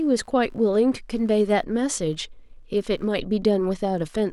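Throughout the speech runs computer activity noise. A faint buzzing chirp sits far beneath the voice, pulsing around 70 times a second. It tracks the computer's workload, not the speech. Processor or graphics load is disturbing the shared ground of the audio circuit.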